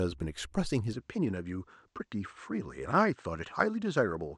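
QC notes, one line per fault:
0.93–4.38 s, input switched to a poorer device: from 0.93 s the speech loses its top end and turns duller, with nothing above 8.6 kHz, while the loudness holds steady and the change arrives without any gap. A faint new noise floor, very far below the speech, sits underneath from that point on. The likely cause is the recording input moving mid-take to a narrower-band microphone or headset path, which brings its own tone and background noise.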